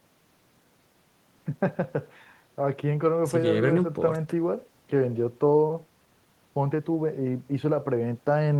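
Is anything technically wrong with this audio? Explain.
No, nothing technically wrong.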